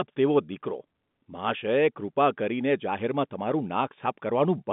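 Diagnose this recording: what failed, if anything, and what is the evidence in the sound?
Nothing has failed: the speech carries the expected sound of G.711 A-law telephone coding, confined to a line band of roughly 150 Hz to 3.6 kHz with nothing above about 3.8 kHz, and any coding damage is at most faint.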